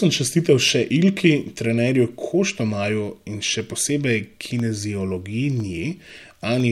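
From 2.60 to 6.60 s, periodic USB or driver dropouts stall audio once per second, silencing about half a millisecond each time, which is heard as regular ticks during speech.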